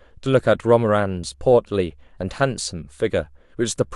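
Nothing is technically wrong with this speech clip, and there are no faults to time or trace to a cause.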